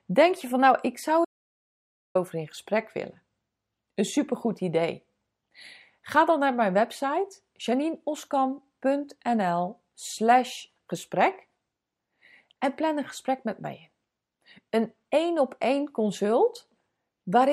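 At 1.25 s, after "van nou ik zou", the speech stops dead. This is an audio dropout to silence. For 0.9 s there is total silence, with no room tone. Sound returns at 2.15 s with "in gesprek willen". The input was likely lost mid-recording.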